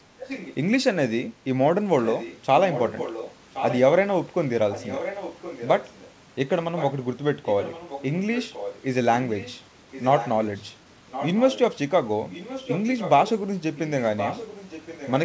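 Echo leak at 0.19–0.55 s, 1.99–3.79 s, 4.72–6.09 s, 6.76–8.82 s, 9.35–11.76 s, and from 12.3 s to the end. A copy of the speech returns 1.07 s late, about 15 dB down at first and about 10 dB down after that. The likely cause is a far-end echo canceller letting loudspeaker pickup through. The band stops at 8 kHz, as expected for a wideband call codec.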